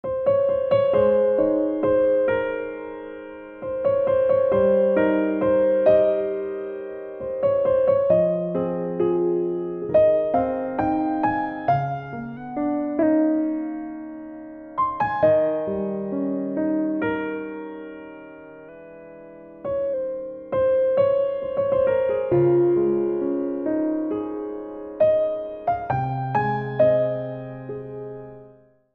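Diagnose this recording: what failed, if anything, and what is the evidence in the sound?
At the driver or buffer stage, clock-matching software likely stepped the playback rate to rebalance its buffer, a drift correction step. From 12.37 to 13.03 s and from 18.69 to 19.94 s the sound runs 5.9% fast, rises nearly a semitone, then snaps back.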